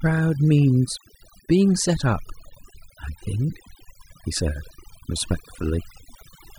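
From start to finish the speech carries overdone noise removal. A noise reduction stage was run too aggressively on a noisy recording, pulling individual frequency bands down hard or muting them whenever their level sat close to its noise estimate. Low-level parts of the speech fall below that threshold and are stripped along with the noise. Between phrases the floor drops away, breaking up into sparkling, chirpy artefacts.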